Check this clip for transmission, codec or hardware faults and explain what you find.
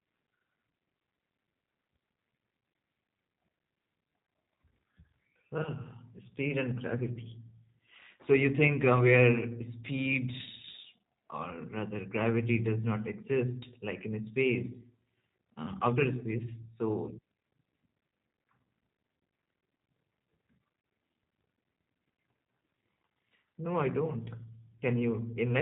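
Throughout, the speech carries G.729 codec damage. The codec rebuilds each short frame from a vocal tract filter, a pitch predictor and a handful of pulses. Nothing passes above 3.8 kHz. The result sounds plainly rough and synthetic, which fits an 8 kbit/s G.729A link.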